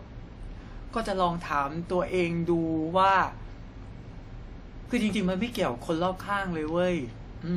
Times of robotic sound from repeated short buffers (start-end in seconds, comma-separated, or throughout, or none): none